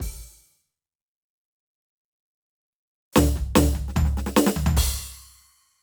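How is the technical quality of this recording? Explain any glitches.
No technical glitches can be heard in this music recording. There is nothing to explain, as no fault turns up anywhere in it.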